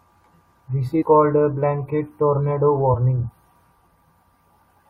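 At 1.01 to 1.03 s the speech jumps ahead just before "a blanket tornado". This is compressed frames skipped. Frames the decoder never played leave a gap of roughly 150 ms, which fits about seven 21.3 ms frames.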